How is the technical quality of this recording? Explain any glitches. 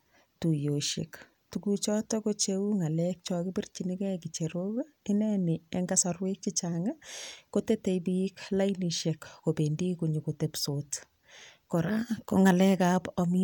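The technical quality of this recording is good, with no glitches to explain.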